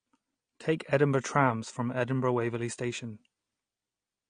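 AAC compression runs through the whole clip: the speech is dull, with nothing above about 9.7 kHz, and sibilants and sustained sounds carry a smeared, fizzy warble. The likely cause is AAC-LC coding at a low bitrate, around 32 kbps, which lowered the cut-off and coarsely quantised the remaining bands.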